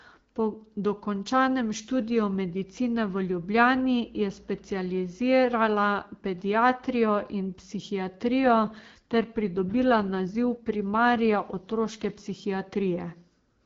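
At 8.44 s there's an AMR rate drop that lasts until 12.18 s. The HD Voice link steps down, which fits a move from 12.65 to 8.85 kbit/s, so the speech turns rougher and more synthetic, with no gap or band change, before returning to clear.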